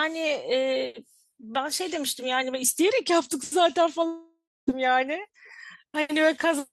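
Speech that breaks at 4.07 s into a fading buzz, then silence, resuming at 4.69 s with about 0.6 s lost, likely a long network dropout.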